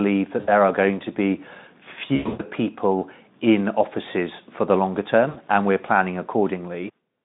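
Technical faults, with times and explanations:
0.39–0.50 s, VoIP packet loss concealed by the speech codec: about 80 ms of audio is missing, consistent with four lost 20 ms frames, and the Speex decoder fills the gap by repeating its last pitch and spectral shape at falling gain, so the sound smears into a brief buzzy tone.
2.15–2.44 s, VoIP packet loss concealed by the speech codec: 220 ms is lost, scattered over 240 ms, with the longest run at 120 ms. The extrapolated buzz fades toward coloured noise, and because each decoded frame depends on the one before, the audio stays weak or distorted after packets resume.
5.29–5.39 s, VoIP packet loss concealed by the speech codec: 60 ms is lost, heard as a short tonal smear and dip in level.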